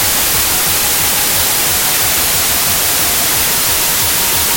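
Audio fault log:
throughout, wrong sample width: packed 24-bit samples read as 32-bit mismatch byte boundaries, giving loud noise with the buried original playing 1.33 times fast and raised in pitch.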